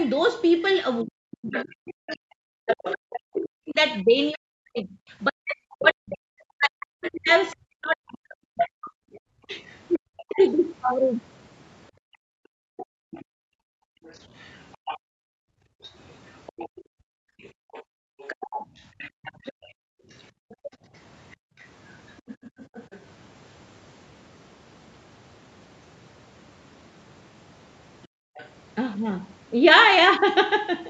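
From 1.03 to 10.44 s a second voice sits under the talker, roughly 10 dB down. This is the other side's voice leaking through, likely residual loudspeaker echo the canceller missed. Over nearly the same span, 1.04 to 10.4 s, the talker's own speech repeatedly sinks, at worst by around 40 dB, for about seven seconds in total. That is speech suppressed in double talk, likely the canceller turning everything down while both sides spoke at once.

Between 11.91 and 18.0 s the room sound drops out in patches, by about 35 dB and for roughly four seconds altogether. The background is being gated by the echo canceller, which clamps the microphone while the loudspeaker plays.

From 12.77 to 22.99 s the leaked far-end voice returns, fainter at roughly 20 dB below the speech. The cause is likely the same incomplete echo removal. Within that stretch, 18.28 to 20.7 s, the talker again dips in short bursts totalling under a second, likely double-talk suppression. 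From 19.97 to 22.51 s the background gates out briefly, about 35 dB down for under half a second.

At 28.02 to 28.49 s a faint scrap of the other side leaks through at roughly 25 dB below the speech, likely leftover echo. Inside it, 28.08 to 28.35 s, the background gates out by about 35 dB.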